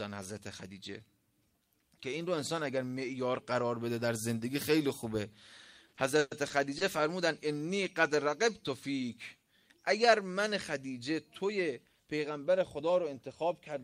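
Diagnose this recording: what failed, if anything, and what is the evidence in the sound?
Repeated stalls (stutter) between 5.87 and 6.82 s, a network-stage fault at the receiver's jitter buffer. Packets arrived late or slower than playback consumed them, so the buffer ran dry five times in under a second. Each time the receiver stretched the last sound to cover the wait, fading it on the longer holds, the longest about 120 ms. Roughly 210 ms was filled this way, about a fifth of that stretch, with nothing lost, which is why the sound drags and stutters rather than skipping.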